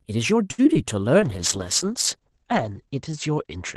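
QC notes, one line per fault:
0.51 to 0.60 s, short stall from a late packet: a packet arrived late, the jitter buffer ran dry, and the receiver stretched the last sound for about 69 ms before resuming exactly where it left off. Nothing is missing. The sound is held too long with a faint buzz or dip, and everything after it plays about 69 ms later. That lengthening, with no content dropped, is what separates it from the losses that follow.
0.64 to 0.67 s and 0.74 to 0.77 s, short concealed packet loss: in each spot about 20 ms of audio never reached the decoder, and the receiver patched it by extending the preceding sound, about 8 ms at the first and 14 ms at the second, then crossfaded back. Each is a brief smear or wobble. Unlike the stall, real content is gone here, so a short consonant-like sound can disappear rather than being held.
1.21 s onward, call bitrate drop: the bandwidth estimate fell and Opus was pushed from 32 kbps down to 9 kbps, staying at the lowest rate for about 1.6 s, with the audio band cut from 12 kHz to 8 kHz. 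The speech turns rough, watery and duller from that point. What marks it as a bitrate drop rather than ordinary codec coloration is the audible change partway through, against the cleaner start at 32 kbps.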